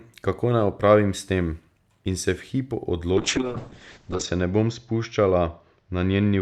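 Speech, with a call bitrate drop starting at 3.14 s and lasting to the end of the clip. The sound turns coarse and watery as the encoder is starved of bits. The roughness points to a fall from around 64 kbps to about 6 kbps. The top end collapses too. The audio band shrinks from 20 kHz to 8 kHz, so the speech sounds muffled. The worst stretch lasts about 1.09 s.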